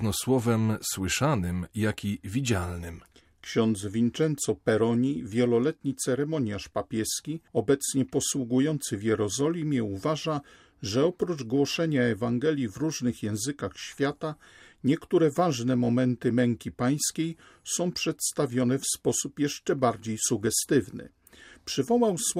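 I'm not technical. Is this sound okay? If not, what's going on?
No. From about 5.15 to 8.90 seconds the speech picks up a faint hiss and roughness. This is sample clock jitter. The device recording the sound keeps time with a tiny clock, and here that clock wobbles. Each snapshot of the sound is taken a fraction early or late, by well under a millionth of a second. Fast, sharp parts of the voice suffer most. So the fuzz rides on loud and bright sounds and disappears in pauses.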